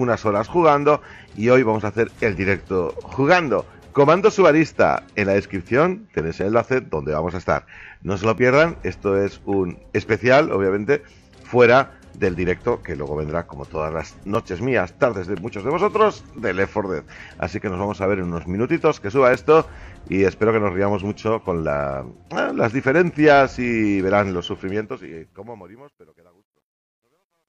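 At 6.41, 8.38, 14.35, 15.37, 16.38 and 19.34 s the audio skips forward. This is overlap between stream segments: the time stamps of adjacent 1.0 s segments overlap, and the player trims the supposed duplicate even though that material was not actually repeated. Between 30 and 42 ms of sound disappears at each join, leaving a hard discontinuity in the waveform, heard as a tiny skip.

The fade-out, which begins around 24.6 s, shows truncation distortion on a fade from 24.61 s to the end. The fade stage keeps only 11 bits and applies no dither, so as the level drops toward the smallest quantisation step the waveform collapses into a few coarse stair-steps. From 25.84 s to the end the tail turns gritty.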